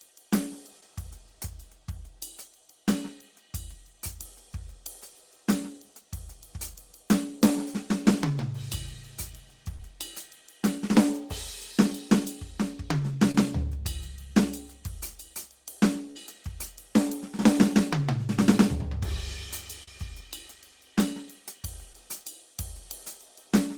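Short concealed packet loss hits this music at 0.80–0.83 s, 9.76–9.94 s and 13.31–13.35 s, and again at 19.83–19.88 s and 21.93 s. Each time, 10 to 40 ms of audio missed the decoder, and the receiver patched the hole by extending the preceding sound before blending back. Each is heard as a brief smear or wobble.

A burst of packet loss at 16.11–16.17 s drops about 40 ms in a row. The receiver stretches the last sound across the gap for about 47 ms while fading it. The result is a short held buzz or hiss, then the music resumes with that stretch missing.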